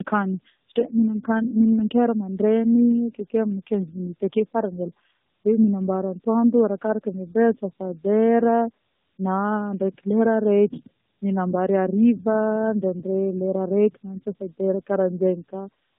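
Throughout, the speech sounds rough, muffled and warbly, with nothing above 3.8 kHz: tandem speech coding, with AMR-NB re-encoding its own decoded output a second time.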